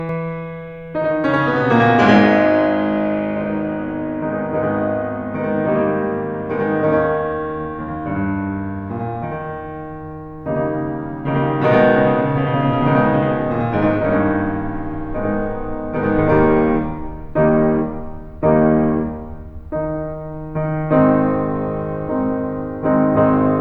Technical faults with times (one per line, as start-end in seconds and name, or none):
0.00-16.18 channel delay (doubling)